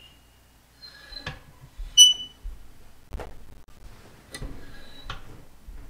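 From 3.03 to 3.84 s, a burst of processor overload crackle tears through the sound. The processor keeps missing its buffer deadlines, and each miss drops in a short silent gap with hard edges. The spacing suggests buffers of roughly 10 ms, with dozens missed.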